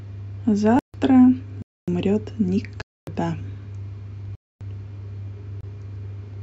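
The speech drops into blocks of digital silence at 0.79–0.94 s, 1.62–1.88 s, 2.82–3.07 s, 4.35–4.61 s and 5.61–5.63 s, each cutting out and back with no fade. Three identical 256 ms holes suggest whole output buffers went unfilled in time.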